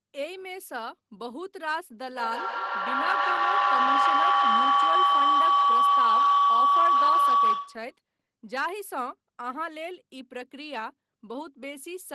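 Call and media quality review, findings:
Feedback howl, 2.04 to 8.0 s. Tone near 1 kHz, pulsing roughly every 150 ms, peaking about 9 dB over speech. Two co-located endpoints; acoustic loop gain exceeds unity.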